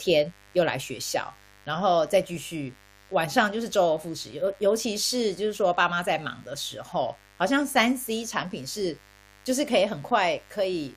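Mains buzz runs from start to finish under this speech recording, a steady raspy tone sitting roughly 30 dB below the talker. Sharp switching spikes at twice the 50 Hz mains rate, from a dimmer, rectifier or unshielded lead, spray harmonics up into several kHz.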